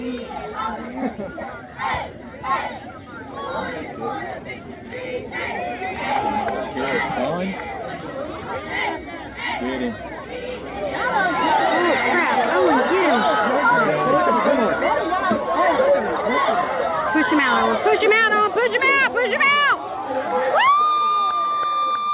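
There are no technical faults to describe at any point in the clip; the audio comes through a G.711 A-law call path with nothing above 4 kHz, which is normal for that codec.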